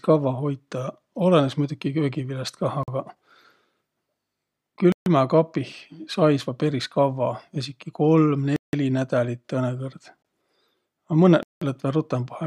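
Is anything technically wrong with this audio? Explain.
Yes. The speech is cut by five blocks of digital silence: 2.83 to 2.88 s (46 ms, which fits a 2048-sample buffer), 4.92 to 5.06 s (139 ms), 8.56 to 8.73 s (169 ms), 10.22 to 10.25 s (22 ms), and 11.43 to 11.62 s (186 ms, consistent with 8192 samples). The output was zeroed, most likely because the buffer wasn't filled in time. Each gap is long enough to be heard as a short hole rather than a tick, and the longer ones sound like brief dropouts. On a waveform they appear as flat lines with hard edges. On a spectrogram they show as blank vertical bands.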